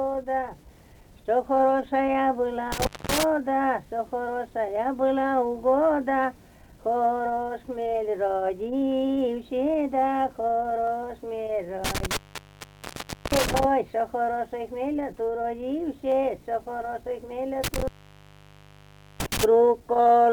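Three times the audio cuts out with crackle at the edges, leaving only faint hiss while it is gone: from 2.72 to 3.23 s with a dropout of about 0.23 s, from 11.85 to 13.65 s with about 1.15 s missing, and from 17.64 to 19.44 s with about 1.32 s missing. These are intermittent contact faults, where a loose cable or plug briefly breaks the connection. The scratchy edges come from the contact making and breaking before it settles. Two single sharp clicks, at 10.87 s and 16.12 s, are likely dropped samples. A few samples vanish from the stream, a tiny fraction of a millisecond, so the waveform jumps abruptly to a later value. The gap is far too short to remove any audible sound, but the sudden step produces a brief click spread across the whole spectrum.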